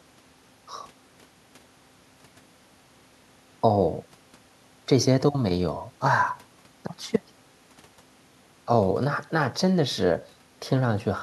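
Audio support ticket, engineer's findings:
Engineer's findings: no fault found in the speech audio on this ticket.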